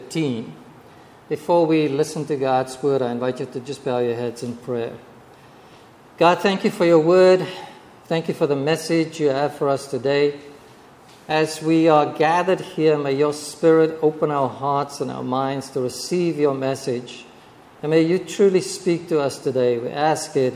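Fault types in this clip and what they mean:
No faults can be heard.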